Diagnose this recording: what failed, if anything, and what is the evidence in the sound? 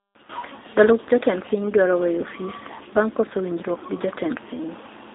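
Codec stage: G.729 coding throughout, its rough, synthetic speech fitting an 8 kbit/s vocoder; the spectrogram shows a hard ceiling at 3.7 kHz and nothing below about 250 Hz.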